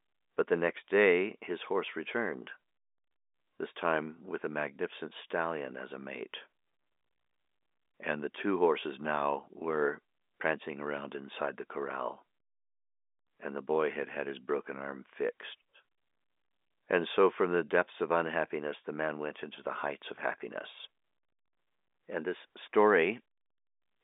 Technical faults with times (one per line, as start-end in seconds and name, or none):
none